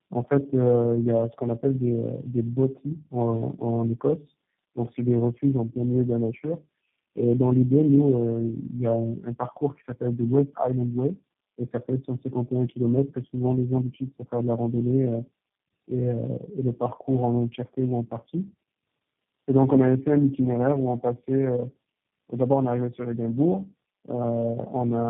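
Speech runs through tandem speech coding for its whole length, with nothing above 3.6 kHz. The roughness, muffling and warble stack beyond any single narrowband coder, which fits four speech codecs in a row, such as AMR-NB, GSM full rate and G.729A twice.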